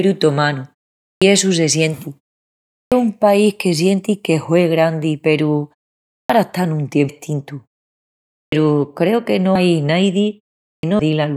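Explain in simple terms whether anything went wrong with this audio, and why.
Two things went wrong, each several times.

The first is a clipped start after a pause. Five times, the speech returns from a short silence with its opening cut off: at 1.08 s before "essu se sienti", at 2.78 s before "un país que sienti", and at 6.18, 8.39 and 10.7 s. Each time, about 0.11 to 0.14 s of the start is missing. The silences last under a second. The playback device seems to doze off during them and needs a moment to wake, so the first sounds are swallowed.

The second is compressed frames skipped. At 7.09 s, at 9.55 s just after "creu que no", and at 10.99 s, the audio suddenly jumps forward. The jumps skip roughly 0.4 s, 0.2 s and half a second of speech. The size of these jumps fits whole 32 ms blocks of the compressed file being lost or rejected as damaged.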